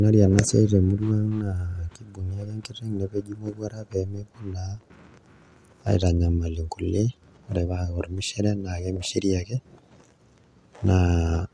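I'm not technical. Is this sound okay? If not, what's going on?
Yes, no faults heard.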